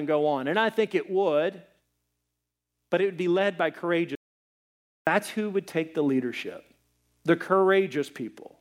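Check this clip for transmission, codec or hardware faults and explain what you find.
One fault was found. At 4.15 to 5.07 s there is an audio dropout to silence. The input was likely lost while the recorder kept writing silence. After "would be led by", the speech stops dead into 0.92 s of total silence with no room tone, then resumes at "who would take the".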